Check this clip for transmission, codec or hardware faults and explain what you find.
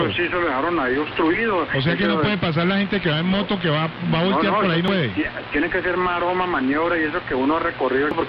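Two short codec faults turn up near the middle and the end.

Damaged data in a compressed stream occurs at 4.88 s and again from 8.11 to 8.14 s. Corrupted bytes make the decoder misread those frames and lose sync while it hunts for the next valid frame header, producing a brief chirp, squawk, click or short hole each time.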